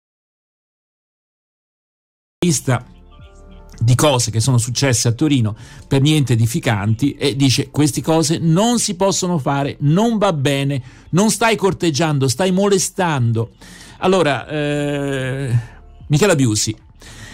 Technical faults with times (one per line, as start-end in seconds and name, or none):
0.00-2.42 audio dropout to silence